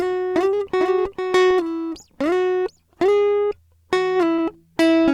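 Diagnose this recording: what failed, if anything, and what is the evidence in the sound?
Doubled audio track, from the start to 1.52 s. The music is already doubled when the clip opens: a second full-band copy trails the original by roughly half a second, about 5 dB quieter. It carries no decay or room colour, and it cuts off abruptly at 1.52 s. That clean, fixed offset is likely a routing or capture-stage fault, with the same signal reaching the mix twice through a second, slower path.

Short concealed packet loss, at 3.47–3.53 s and 4.35–4.40 s. This is a network-stage fault. Each event is a brief smear in the music where about 40 ms of audio failed to arrive in time. The receiver's decoder filled roughly 34 ms of the first hole and 31 ms of the second by extending the preceding sound, then blended back into the real signal. That is why the music wobbles briefly instead of dropping to silence.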